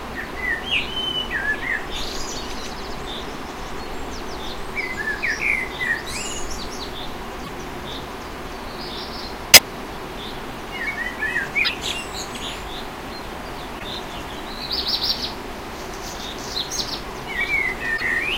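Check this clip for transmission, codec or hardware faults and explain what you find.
The clip has one kind of fault, damaged data in a compressed stream, occurring five times: at 7.41 to 7.49 s, 9.52 to 9.61 s, 11.61 to 11.70 s, 13.76 to 13.84 s, and 17.96 to 18.02 s. Corrupted bytes make the decoder misread those frames and lose sync while it hunts for the next valid header, so each spot breaks into a brief chirp, squawk, click or short hole of about 56 to 84 ms.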